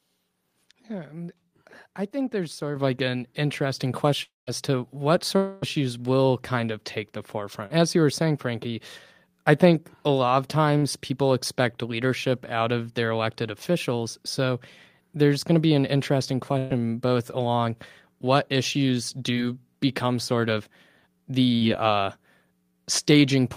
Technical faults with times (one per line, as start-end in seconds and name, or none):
2.76 microphone volume stepped up
4.23-4.49 long network dropout
5.37-5.64 long network dropout
7.66-7.72 short concealed packet loss
10.78-10.84 short concealed packet loss
16.58-16.72 burst of packet loss
21.56-21.63 burst of packet loss